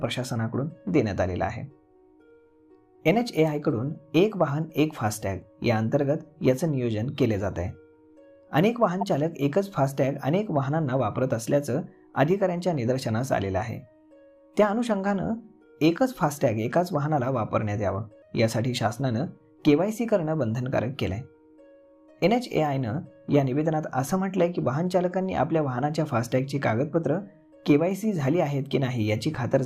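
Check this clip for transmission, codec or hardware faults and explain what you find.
One fault turns up: a short blip from 9.01 to 9.03 s, a sharp squeak-like burst lasting about 25 ms that doesn't belong to the surrounding sound. This is a corrupt frame decoded. Bits inside a couple of compressed frames were damaged, and the decoder played them anyway. The misread gain values and spectral codes placed energy at the wrong frequencies for the length of those frames, producing the brief chirp before normal decoding resumed.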